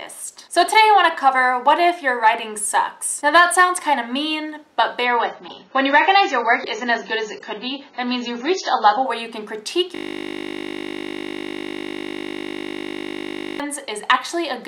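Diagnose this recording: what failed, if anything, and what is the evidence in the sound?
From 5.05 s to 9.05 s the treble abruptly vanishes, with nothing audible above 7 kHz, and the sound turns smeared and synthetic, with codec artefacts rising. There is no gap at either edge; quality simply steps down and then back up. This is the adaptive stream at a lower bitrate, a network-stage fault. The connection slowed, so the player switched to a much leaner encode, which fits a drop to around 16 kbit/s AAC, before recovering.

At 9.95 s the sound collapses into a steady, hard buzz that holds until 13.60 s. Listening closely, it is one 20 ms fragment repeating exactly, giving a 50 Hz drone rather than a stutter. This is a system hang loop at the driver or buffer stage. The computer or audio driver froze while the sound hardware kept cycling through the same short ring buffer, replaying its contents over and over until the system resumed.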